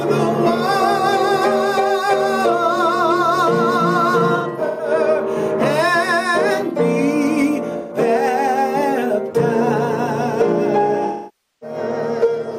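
AAC frame loss with concealment occurs at 4.36 to 4.90 s, 7.78 to 7.96 s and 11.06 to 11.76 s. At each point, missing frames are filled in by the decoder from the last good spectrum, so the audio is patched over rather than cutting out cleanly. The first patch spreads 299 ms of loss across 427 ms, worst in a run of about 150 ms. The second lasts 128 ms, and the third, at 555 ms, is the longest stretch of synthesised fill.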